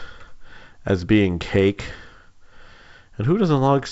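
Nothing goes wrong anywhere in this speech, which comes through a G.722 wideband telephone path at 64 kbit/s that is doing its normal job, and at most a faint trace of that coding can be heard.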